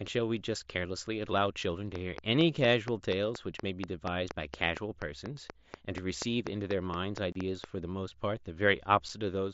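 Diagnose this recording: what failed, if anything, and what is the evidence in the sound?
Unconcealed Bluetooth headset packet loss hit the headset-to-phone radio link. The speech cuts out from 7.32 to 7.36 s, a 30 ms hole that fits four lost frames. A 7.5 ms gap follows at 9.09 s. Nothing fills either gap, so both edges are abrupt.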